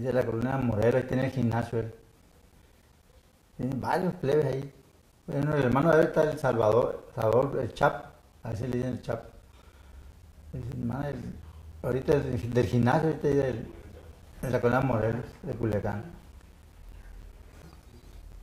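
From 0.11 s to 18.33 s there are periodic USB or driver dropouts: every 0.1 s, around 10 ms drops to silence, giving a steady ticking under the sound.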